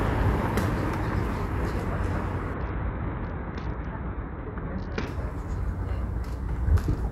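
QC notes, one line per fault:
2.54–5.07 s, Bluetooth SBC bit pool drop: encoder starved of bits, fitting a bit pool cut to 7 near 66 kbps; top sub-bands get few or no bits, treble dulls, gritty noise rises.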